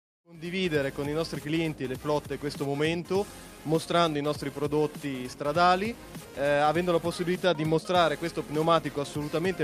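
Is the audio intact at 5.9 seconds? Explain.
Yes, the audio at 5.9 seconds is intact, with no fault to be heard at that moment.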